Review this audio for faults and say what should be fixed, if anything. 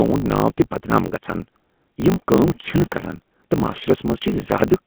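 The GSM full-rate codec damage runs throughout the speech. The sound is plainly buzzy and gravelly. The codec builds the voice from a vocal-tract model fed by sparse, evenly spaced pulses. That coarse excitation causes the roughness. The band is narrow, like a phone line of roughly 150 Hz to 3.4 kHz. Nothing reaches above 4 kHz. The character fits the 13 kbps full-rate codec. Prevention: carry the audio on a wideband or higher-quality codec instead of GSM full rate.

A block size mismatch (truncated) is also present throughout. A steady buzz sits at 50 Hz, the rate at which the blocks are cut. One stage writes longer blocks than the next stage reads, so the tail of each block is dropped. The missing pieces make the speech run 1.16 times faster. The pattern fits 1024-sample blocks being read short. Prevention: match the block sizes between the writing and reading stages, or buffer the audio so no samples are discarded.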